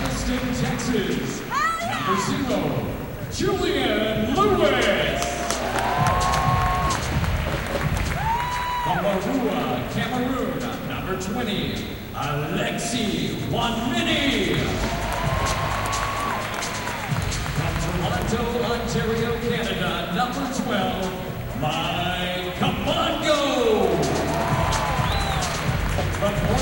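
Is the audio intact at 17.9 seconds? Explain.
No. At 17.9 s, as through the whole clip, there is video or display buzz. A screen or video cable is coupling into the audio. It adds a 59.94 Hz field-rate buzz with hash above it, plus a thin 15.7 kHz line tone, roughly 20 dB below the sound.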